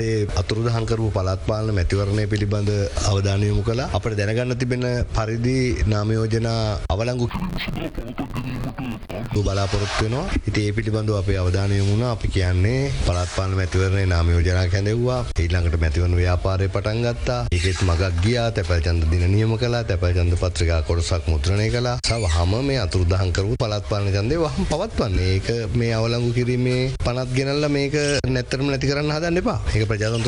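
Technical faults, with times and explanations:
7.29–9.37 s, interleaved audio read as planar: short 10.88 ms blocks split wrongly, so it goes dull and robotic with a buzz at about 92 Hz.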